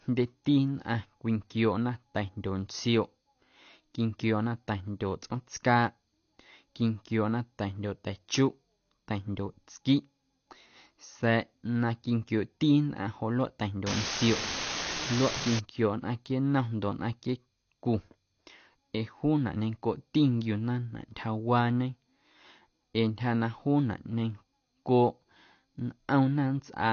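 The whole speech clip sounds dull and smeared. Nothing is heard above 6.5 kHz. Sibilants fizz and warble. This is plainly audible AAC compression, likely AAC-LC at a low rate, which fits about 32 kbps. The encoder dropped the top band and starved the rest.

From 13.87 to 15.59 s, an unreliable data bit adds a steady crackle. One marginal data line flips its bit in random samples. Each error is an equal-sized spike. The fizz runs through pauses as well as sound.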